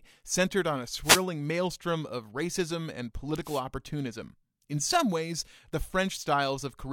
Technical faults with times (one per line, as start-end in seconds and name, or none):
1.02-1.24 wireless microphone noise hit
3.44-3.61 wireless microphone noise hit